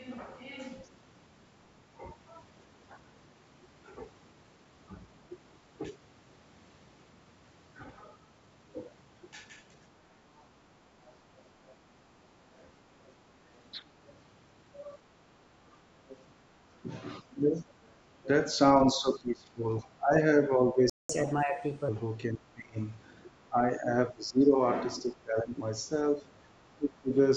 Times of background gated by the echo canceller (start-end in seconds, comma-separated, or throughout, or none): 15.58-15.69